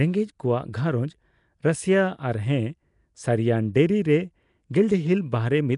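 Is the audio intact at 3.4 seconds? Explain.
No. At 3.4 seconds, as throughout the clip, the speech carries the rough, hissy halo and smeared, underwater quality of likely Nellymoser compression, consistent with about 44 kbps. Weak bands get noise fill instead of detail, and nothing remains above 10.6 kHz.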